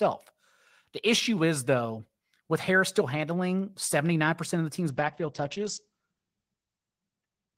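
At 4.91 s a call bitrate drop sets in and lasts to the end of the clip. The encoder's target falls from 32 kbps to 10 kbps, holding at the lowest rate for about 1.93 s. With so few bits, the codec quantises the speech coarsely and narrows the audio band from 20 kHz to 8 kHz. The result is a duller, muffled top end with a rough, watery texture.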